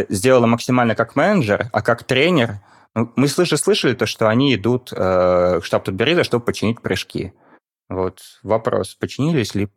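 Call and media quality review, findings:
No audible faults found in the speech audio.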